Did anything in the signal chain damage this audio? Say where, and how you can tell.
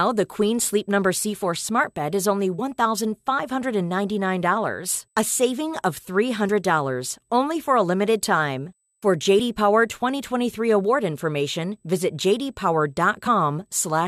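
Yes. Damaged data in the compressed stream, at the codec or storage stage, causes brief glitches at 2.58 s (after "smart bed is only"), 6.48 s (after "a saving of"), 9.38 s and 13.26 s. Corrupted frames lose decoder sync until the next header, leaving a short glitch in the speech.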